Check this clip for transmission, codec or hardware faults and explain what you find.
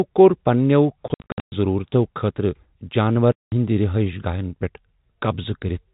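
There's packet loss filled with silence, in two spots. From 1.08 to 1.52 s about 320 ms goes missing in scattered gaps, the longest 120 ms; then 3.32 to 3.52 s drops out solidly. The receiver played silence for lost packets, so the speech gets chopped by hard-edged holes in steps that fit 20 ms packets. The telephone-band G.711 coding underneath is doing its normal job.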